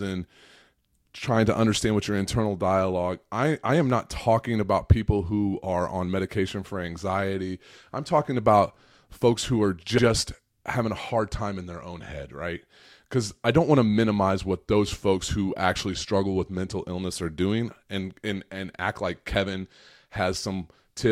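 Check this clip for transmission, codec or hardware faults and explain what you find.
One fault turns up, a case of repeated frames. At 9.97 to 10.04 s, just after "who are", a 70 ms block plays twice. A run of compressed frames, which fits about three, was sent again. The decoder replays it, causing a brief stutter and adding 70 ms.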